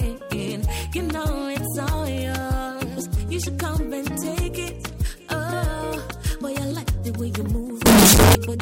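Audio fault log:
7.86–8.35 s, signed and unsigned mixed up: sudden loud, harsh distortion with quiet parts as loud as the rest, likely 16-bit samples read with the sign bit flipped.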